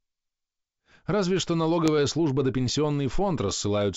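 Bit errors on an ADPCM link strike the speech twice, from 1.86 to 1.89 s and again from 3.47 to 3.51 s, on a G.722 wideband connection. A small fraction of a percent of bits flip. Each flipped bit also throws off the decoder's step size and prediction, so the damage outlasts the bit itself. The result is a pop and a short rough burst with a brief change in level, slightly longer at the second spot.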